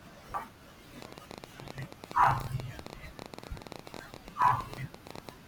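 At 0.34 s there is a dropped buffer (overrun), likely from the program failing to read its samples before the hardware overwrote them. Roughly a third of a second of speech vanishes, and the two sides butt together with an abrupt jump forward.

From 1.02 s to 5.30 s a train of clicks runs over the speech, likely from interference or a faulty connection injecting pulses. Around seventy similar ticks arrive at about 13.3 per second with uneven spacing, peaking around 10 dB above the speech.

A second dropped buffer (overrun) at 3.93 s loses about a tenth of a second, leaving another skip.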